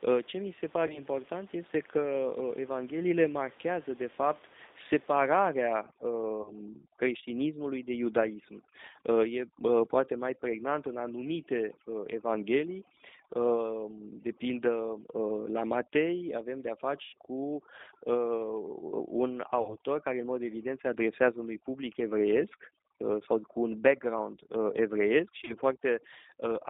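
Speech runs through the G.729 codec for the whole clip. Nothing passes below about 250 Hz or above 3.7 kHz. The voice sounds rough and slightly synthetic, which fits G.729 at 8 kbit/s, where a vocal tract filter and a few pulses rebuild each frame. VoIP packet loss, concealed by the speech codec, hits five times. The first falls at 0.87 to 1.03 s, between "mi se" and "este că". The others come at 6.42 to 6.53 s, 17.04 to 17.17 s, 19.62 to 19.74 s and 25.45 to 25.54 s. The decoder filled 30, 30, 90, 60 and 30 ms gaps by stretching its last sound into a fading buzz or coloured noise. The voice stays weak briefly afterwards. From 5.34 s to the end, overdone noise removal is at work. The room noise, about 26 dB below the speech, drops and breaks up into twinkling specks. Quiet parts of the voice are cut away too.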